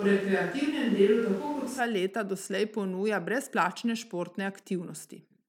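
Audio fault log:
0.00–1.79 s, switch to a distant microphone: speech opens roomy, hollow and thin in the bass, with background noise about 25 dB down, then snaps back to a close, full sound at 1.79 s at much the same level. A far microphone was likely standing in.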